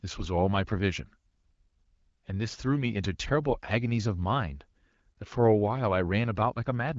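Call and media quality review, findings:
No faults found in the speech; AMR-WB (HD Voice) path at 12.65 kbit/s shows only light codec effect, consistent with that rate.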